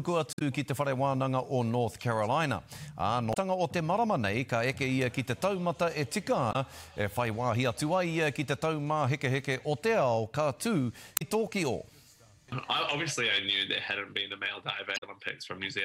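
At 0.30 to 0.42 s, a short glitch breaks through the sound. It is damaged data in a compressed stream. Four more follow: 3.30 to 3.37 s, 6.49 to 6.56 s, 11.14 to 11.22 s, and 14.94 to 15.03 s. Each burst lasts under an eighth of a second. Bytes in the coded stream were corrupt there. The decoder misread those frames, lost sync, and hunted for the next valid header. Each one sounds like a brief chirp, squawk, click or short hole.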